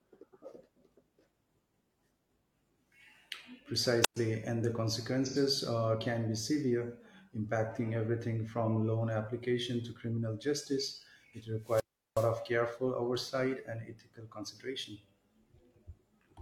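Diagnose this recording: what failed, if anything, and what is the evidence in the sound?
Wireless microphone squelch dropout at the radio link: hiss swells, then near-silence of 116 ms at 4.02 s and 369 ms at 11.60 s, before "and the" and "careful oversight and". The rising noise before each hole separates it from a digital gap.

AAC frame loss with concealment in the codec: 5.25 to 5.36 s, between "and the" and "uh can be severe", an 85 ms smeared, phasey patch, which fits about two lost frames. The audio is filled in rather than muted, and no static precedes it.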